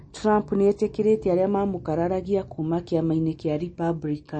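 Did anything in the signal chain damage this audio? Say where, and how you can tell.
Yes. The damage sits at the codec stage, and it's there for the whole speech clip. Nothing gets through above about 8.4 kHz, so the top end is sliced flat, and the sibilants have that watery, swirly quality. It's likely MP3 compression at a starved bitrate, something like 35 kbps. The encoder runs out of bits, chops the treble at a fixed point, and drops quiet frequency lines that flicker in and out frame to frame.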